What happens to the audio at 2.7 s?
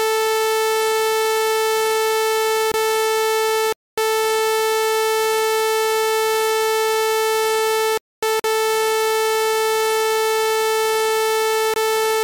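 A block of digital silence runs from 2.72 to 2.74 s. About 23 ms of audio falls silent, which fits a 1024-sample block. The abrupt cut leaves a brief hole.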